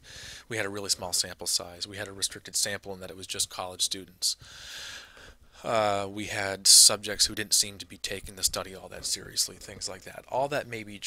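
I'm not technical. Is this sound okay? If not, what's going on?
Yes, nothing in this recording is faulty.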